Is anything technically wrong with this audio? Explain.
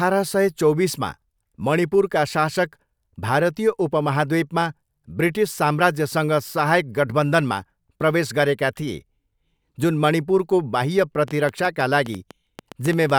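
Yes. A train of clicks runs from 11.28 s to 13.11 s, starting just after "जुन मणिपुरको बाह्य". About fifteen similar sharp pulses arrive at an uneven pace, averaging 7.7 per second and peaking about 5 dB above the speech, so they stand out clearly. The likely cause is electrical interference from nearby equipment or a faulty connection or power supply, either one injecting brief spikes. They are heard as irregular ticking and popping laid over the speech and its pauses.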